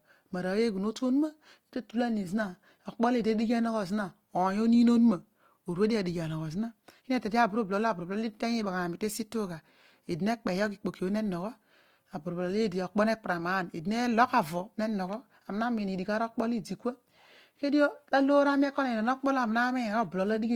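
Throughout the speech, the audio has likely passed through Opus compression at a low rate, with the encoder in its music-style CELT mode. The bandwidth stays full, reaching up to about 20.2 kHz. The damage is plainly audible and points to a bitrate around 24 kbps. Short of bits, the encoder keeps each band's energy but refills detail by copying lower bands or inserting noise, so voiced tones come out rough, grainy and noisy rather than swirly.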